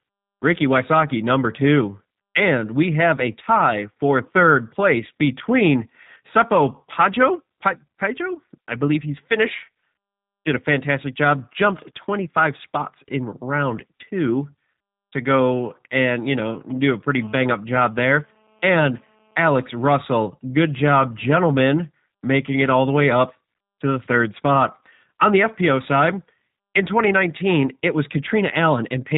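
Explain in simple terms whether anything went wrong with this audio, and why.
G.729 codec, throughout the clip: the speech was squeezed through a phone-call codec that rebuilds the voice from a simple model of the throat and a few pulses rather than storing the real sound. Everything above 3.8 kHz is gone, so it sounds muffled, rough and slightly artificial.

GSM signalling bursts, from 16.38 to 17.19 s, just after "to go and you": a nearby mobile phone exchanging radio signals with its network leaked into the audio circuit. It comes through as a faint galloping ticking and buzzing at about 217 Hz, quieter than the speech.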